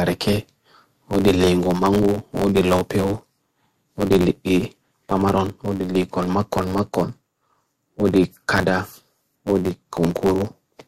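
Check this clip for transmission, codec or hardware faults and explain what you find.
One fault runs through the whole speech clip: a block size mismatch (truncated). One stage writes longer blocks than the next reads, so each block's tail is discarded. This gives a buzz at about 92 Hz, which fits 512-sample blocks. The speech also runs about 1.07 times fast, at roughly normal pitch.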